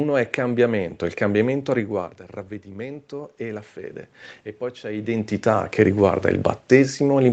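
From 1.74 s to 4.05 s there is automatic gain rising in this speech. The level reaching the microphone falls by about 13 dB near 2 s, around when the talker shifts away, and the gain control answers by slowly adding about 3 dB. Speech and room noise swell together over those two seconds. On a waveform the envelope creeps upward across that span, and a spectrogram shows the background noise floor brightening in step with the speech.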